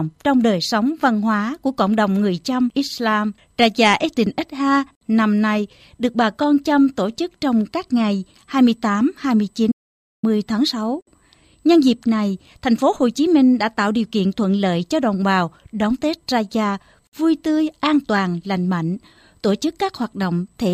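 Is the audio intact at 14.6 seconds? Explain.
Yes, the speech at 14.6 seconds plays through cleanly, with no dropout, click, distortion or other fault audible at that point.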